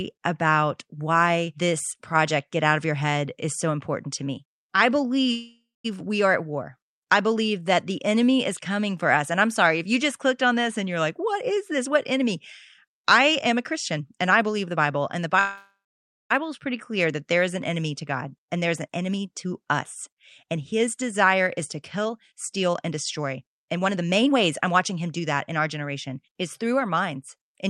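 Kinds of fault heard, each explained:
Call audio freeze: at 5.31 s and 15.39 s, sound stretches into a fading buzz then silence, filling 0.53 s and 0.91 s, likely late packets draining the jitter buffer.
Jitter buffer speed-up: after "this and you're like", 12.86 to 15.34 s, and 18.02 to 26.97 s, pitch-period trimming runs speech 10 to 14% fast to shed buffered delay.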